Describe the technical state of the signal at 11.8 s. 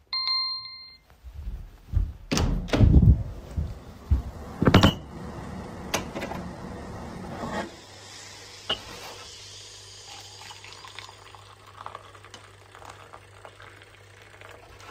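At 11.8 s the audio is intact, with no technical fault present at that moment.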